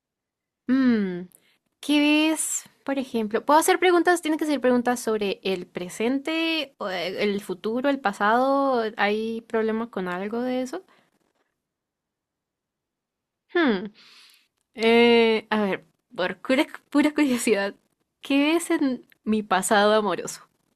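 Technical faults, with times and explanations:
No technical faults can be heard in this speech recording. There is nothing here that calls for a time or an explanation.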